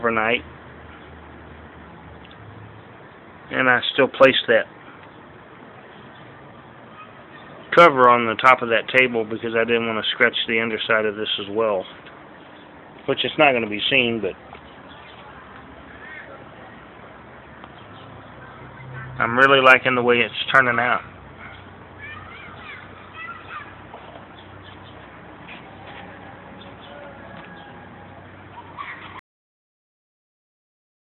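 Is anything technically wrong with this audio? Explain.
Yes. At 29.19 s the audio has a cut-off end: the sound stops mid-event and falls straight to digital silence, with no decay or fade, and that silence holds for the remaining 1.9 s or so of the file. The mechanism is that the final buffers of the stream were never written out or played back, so the recording simply ends wherever the last delivered block happened to finish rather than where the sound itself concluded.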